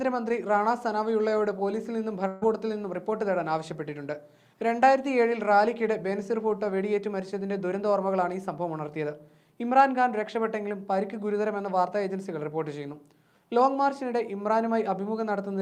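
A burst of packet loss from 2.27 to 2.44 s drops about 140 ms; the receiver stretches the last sound, fading it, then resumes further on.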